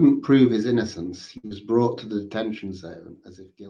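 At 1.37 to 1.45 s, a short stall from a late packet holds the sound about 60 ms while the buffer waits, then resumes without losing anything. At 1.47 to 1.53 s, short concealed packet loss differs: 40 ms never arrives and is patched over, leaving a brief smear where that speech is actually gone.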